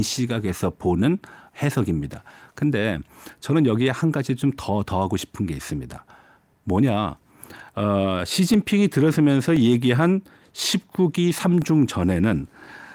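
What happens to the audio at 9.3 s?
At 9.3 s you're in the middle of a run of periodic USB or driver dropouts that runs from about 8.54 s to 12.64 s. Something keeps blocking the USB bus or audio driver about every 1.02 s, and each time roughly a millisecond of the speech is lost and replaced with silence. You get about five evenly spaced ticks across that stretch, and 9.3 s sits between two of them.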